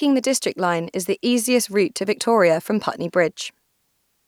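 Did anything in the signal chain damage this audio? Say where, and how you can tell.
No, nothing in the signal chain damaged this audio.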